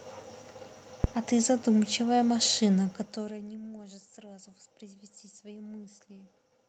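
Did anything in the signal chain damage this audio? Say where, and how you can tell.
Yes. At the analogue input, phantom power or another supply was switched on a live microphone line, and the voltage step passed straight through the coupling capacitors into the preamp. In this speech clip it shows up as a phantom power thump: a deep, low-frequency bump starting at 1.04 s that dies away within about 72 ms, leaving a disturbance that lasts until 1.36 s. Its thud-like character and fast decay are what mark it as a supply transient.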